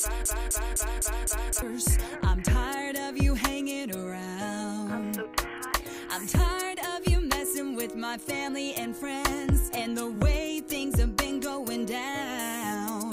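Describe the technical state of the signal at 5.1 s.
At 5.1 s the signal is intact, with no dropout, distortion, glitch or other technical fault to be heard at that point.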